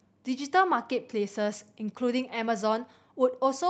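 The speech carries no technical faults; it has passed through a WebRTC call path whose content stops at about 8 kHz, which fits an Opus wideband setting at a moderate bitrate.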